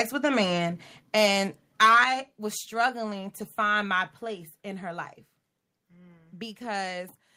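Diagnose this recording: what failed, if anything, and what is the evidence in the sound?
Microphone overload at the converter input: the microphone gain was likely set too high, driving peaks about 6 dB past full scale from 1.8 to 2.04 s. Roughly a tenth of samples there are flattened, giving loud syllables a harsh, crackling edge.

Microphone volume stepped down in call processing: the software likely reacted to hot input by cutting the device's input gain in single steps. The whole signal, voice and background together, drops abruptly by about 3 dB at 1.02 s and by about 7 dB at 2.04 s, right after the clipped stretch.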